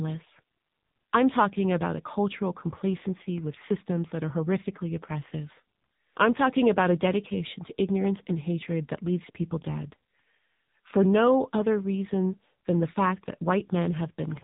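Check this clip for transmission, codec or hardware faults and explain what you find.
There's one fault, running the whole way through: AMR narrowband mobile codec damage. Nothing above 3.8 kHz gets through, and the voice comes out buzzy and synthetic as the low-bitrate vocal-tract model rebuilds it. The heavy damage fits a low mode around 6.7 kbps.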